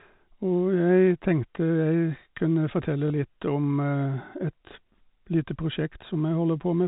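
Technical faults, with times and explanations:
3.08 to 3.10 s, packet loss with last packet repeated: a single 20 ms gap in the speech is filled by replaying the packet just before it, which points to one lost packet. The moment sounds like a small blip. The narrowband G.711 telephone coding around it carries the repeat.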